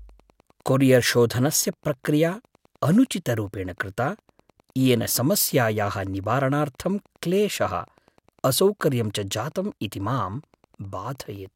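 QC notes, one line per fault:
Throughout, Wi-Fi interference: a faint, steady ticking runs under the speech at about ten ticks per second, low in level, roughly 40 dB below the voice. A nearby Wi-Fi radio's beacon, sent every 102.4 ms, is being rectified by the audio circuitry into audible clicks. On a spectrogram it shows as evenly spaced thin vertical lines spanning a wide frequency range, and the waveform carries tiny regular spikes visible in pauses.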